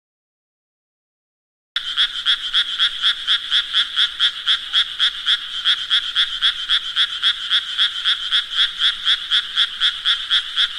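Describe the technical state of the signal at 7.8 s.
At 7.8 s the signal is intact, with no dropout, clipping, glitch or other technical fault audible at that moment.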